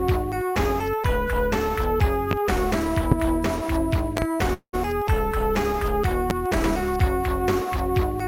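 At 2.31 to 2.34 s a loud pop sits on top of the sound, peaking roughly 15 dB above it while the audio continues underneath. The same single pop recurs at 3.12 to 3.15 s, then as a double pop between 4.17 and 4.25 s, and once more at 6.30 to 6.33 s. Each is a sharp transient, most likely from a voltage step or pulse such as static, a connector or a driver glitch entering the chain.

At 4.53 to 4.75 s comes a call audio freeze. The last sound is stretched into a fading buzz for about 200 ms, including roughly 80 ms of near-silence, and then the audio resumes exactly where it stopped. Nothing is lost, but everything after this point runs about 200 ms late. The likely cause is delayed packets draining the jitter buffer, which fills the gap until delivery recovers.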